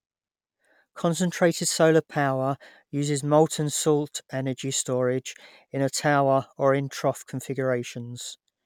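No technical faults are audible.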